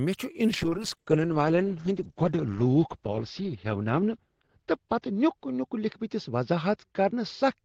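At 0.54 s a call bitrate drop sets in and lasts to the end of the clip. The top end narrows from 20 kHz to about 8 kHz, and the speech turns coarse and muffled, worst for about 2.8 s, which fits an encoder pushed from roughly 40 down to 8 kbps.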